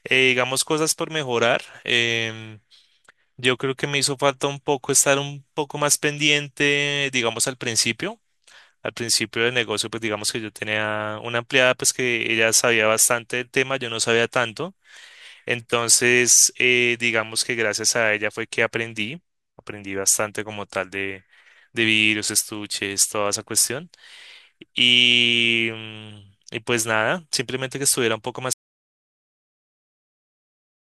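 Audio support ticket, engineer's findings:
Audio dropout to silence at 28.53 s, running to the end of the clip. Speech stops abruptly mid-flow. Gap is silent, no room tone. About 2.3 s of content lost. Likely cause: input lost upstream of the recorder, such as a disconnected mic or a link failure. Recorder kept writing silence. No recovery before the file ends.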